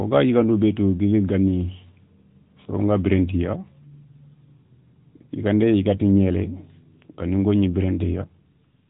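Speech heard through the AMR narrowband mobile codec from start to finish: everything above 4 kHz is gone, and the voice carries a plainly buzzy, synthetic edge consistent with a mid-rate mode around 10.2 kbps.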